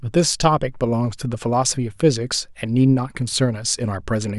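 Speech, with nothing technically wrong with it.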